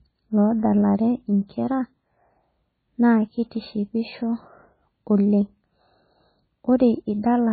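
Throughout the speech, the sound has likely passed through MP3 compression at a starved bitrate, consistent with about 16 kbps. The encoder has cut everything above 4.5 kHz and dropped weak frequency lines frame by frame, leaving dull, strongly watery, swirling audio with smeared attacks.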